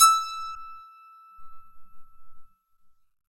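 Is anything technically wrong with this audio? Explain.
Yes, there are two brief glitches in the music, at 0.54 to 0.57 s and again at 2.76 s, where it skips forward with a quick chirp, burst of noise or short hole. That's likely a broken MP3 bit reservoir: frames went missing, so the next frame reached back for borrowed data and decoded bytes from the wrong frame. The MP3 frames here are 26.1 ms long.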